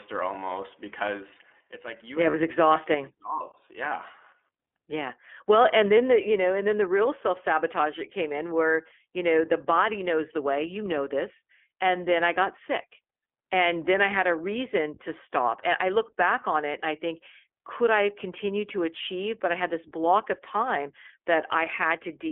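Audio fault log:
throughout: iLBC codec. The speech is confined to a telephone band of roughly 300 Hz to 3.4 kHz, with plainly audible rough, synthetic texture from coding each 20 ms frame's excitation independently. The quality and framing fit iLBC's 15.2 kbps mode.
2.30 to 2.35 s: lost iLBC frames. A 40 ms gap, consistent with two missing 20 ms frames, is filled by the decoder repeating the last pitch cycle with added noise. It sounds like a brief held, slightly buzzy vowel, and normal speech resumes immediately afterwards.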